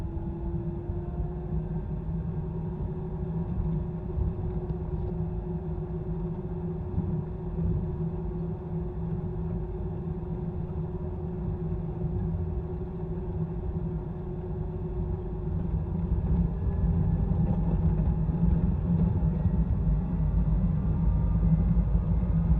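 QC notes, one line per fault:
No faults heard anywhere in this recording.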